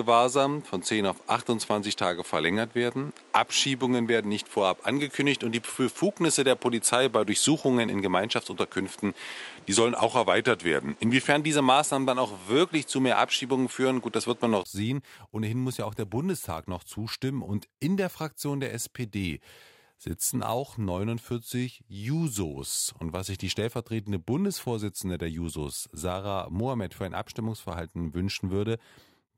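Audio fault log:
0.00–14.65 s, input switched to a poorer device: the first half sounds dull and boxy, with nothing above about 11.4 kHz, a noise floor roughly 30 dB under the signal, and a level around 5 dB different from what follows. At 14.65 s a brief gap of about 20 ms opens and the sound clears up. The likely cause is a change of capture device. A simple low-pass filter would not bring its own noise, level change and gap all at once.
9.37–11.28 s, drift correction step: speed drops by 5.6% and pitch falls by a full semitone (100 cents) together, holds there, then snaps back at 11.28 s. This likely comes from clock-matching software abruptly changing the playback rate to rebalance its buffer. Tape wow or slow drift would glide up and down gradually. Here both the entry and the exit are single sudden steps, and the pitch stays steady in between.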